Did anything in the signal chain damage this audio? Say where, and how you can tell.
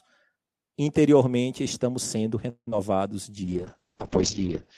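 Yes, in four places, all in the network and codec part of the call path.

At 2.49 to 2.68 s there is a call audio freeze. The speech stops moving forward and the last sound is stretched into a fading buzz that sinks into about 70 ms of silence before the speech resumes where it left off. Nothing is lost, but everything after it now runs about 176 ms late. The likely cause is packets stalling in transit and the jitter buffer running dry. On a spectrogram the last spectrum smears horizontally and then goes blank.

Short concealed packet loss follows at 2.71 and 2.77 s. Each is a tiny smear or wobble where roughly 10 and 20 ms of real audio never arrived and the decoder filled the hole by extending the previous sound. In the waveform these show as brief, overly regular patches. On the spectrogram they appear as thin vertical seams where the fine detail blurs.

From 3.44 s to the end the call bitrate drops from 40 to 9 kbps, holding at the lowest rate for about 1.26 s. 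The encoder, starved of bits, codes the speech coarsely and narrows the bandwidth from 20 kHz to 6 kHz, so the sound turns muffled and watery. On a spectrogram everything above 6 kHz is abruptly cut off, leaving a flat ceiling.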